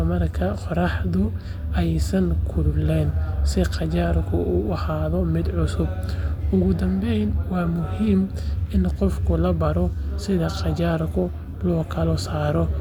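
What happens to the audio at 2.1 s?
Nothing goes wrong at 2.1 s; the speech carries on intact through that moment, with no dropout, click, distortion or other fault to be heard.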